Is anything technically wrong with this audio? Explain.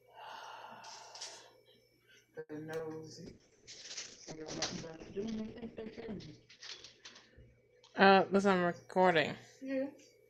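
Yes, several network-related problems.

At 2.39 to 2.51 s there's a call audio freeze: about 100 ms of extended fading sound, ending in roughly 40 ms of silence. It's likely delayed packets draining the jitter buffer, then the audio resumes where it stopped.

Around 2.77 to 2.83 s, short concealed packet loss: about 20 ms never arrived, and the receiver patched it by continuing the previous sound, leaving a brief smear.

From 3.27 to 8.66 s, a call bitrate drop: the sound turns rough and muffled as the top end falls from 20 kHz to about 8 kHz. That fits the encoder going from around 64 kbps to about 7 kbps, staying at its lowest for nearly 3 seconds.

Then two jitter buffer speed-ups, at 8.04 to 9.16 s and 9.63 to 10.19 s. The receiver trimmed small pitch-period slices to cut excess buffered delay, so the audio runs about 6–7% fast at unchanged pitch and sounds slightly hurried.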